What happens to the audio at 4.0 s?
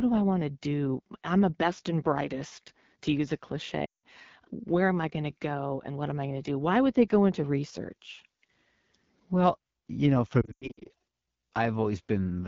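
At 4.0 s the sound is at the tail of a run of lost AMR speech frames, from 3.85 to 4.04 s. It begins just after "brightest to use a". Radio errors corrupted a stretch of about 180 ms, which points to nine consecutive frames. The decoder kept repeating its last good pitch and vocal tract settings while cutting the gain. So the sound drops to near silence within two frames. When it resumes, it is weak or rough for a moment.

The surrounding audio is also coloured by the AMR wideband (HD Voice) codec. Its damage is plainly audible here. The rasp and roughness point to one of the lowest rates, around 8.85 kbit/s. At that rate the pulse-driven model captures the lower band coarsely. The top band, above 6.4 kHz, is only shaped noise.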